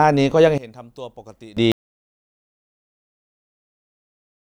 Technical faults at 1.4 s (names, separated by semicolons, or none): one channel inverted